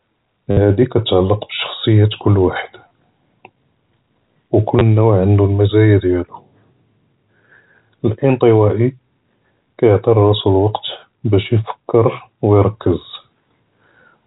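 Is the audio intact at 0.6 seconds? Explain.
No. Just before 0.6 s, from 0.51 to 0.57 s, the sound breaks into a brief robotic stutter with a buzzy texture. This is packet loss with the last packet repeated: about 60 ms of audio never arrived, and the receiver kept replaying the final good packet until fresh data came. Such repeats seldom line up with the pitch. The 60 ms gap fits six 10 ms packets, which would put the buzz near 100 Hz.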